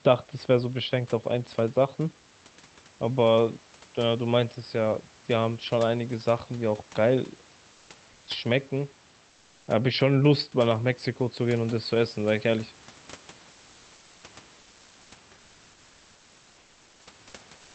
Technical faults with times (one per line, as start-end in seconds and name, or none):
7.71-8.27 comfort noise in place of the background
9.29-9.67 comfort noise in place of the background
13.51-14.23 comfort noise in place of the background
14.59-15.11 comfort noise in place of the background
17.57-17.74 comfort noise in place of the background